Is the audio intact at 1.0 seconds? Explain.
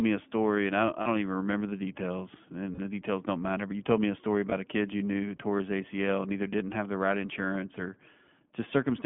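No, not quite. Right around there, from 1.02 to 1.08 s, you get lost iLBC frames: about 40 ms of missing audio, which fits two dropped 20 ms frames. It falls between "story and I don't" and "even remember the details". The decoder fills the hole by repeating the last pitch cycle with some noise mixed in, so it comes across as a short held, slightly buzzy vowel. Since iLBC frames don't depend on each other, the voice snaps back clean right after.

Underneath that, the whole clip carries the iLBC codec itself, and its damage is plainly audible at that moment too. The audio is squeezed into a phone band of roughly 150 Hz to 3.4 kHz, so there's no air or sibilant sparkle on top. The excitation is coded frame by frame at a rate that fits iLBC's 15.2 kbps mode, which gives the voice that clear but slightly rough, synthetic edge.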